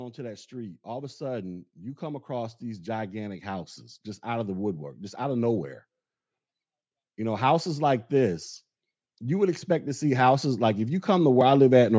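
From 0.15 to 4.59 s, before "just out of nowhere", automatic gain rising swells voice and background together by about 8 dB, a steadily widening waveform envelope. It recurs after "know houses like this", 9.19 to 11.94 s, by about 7 dB.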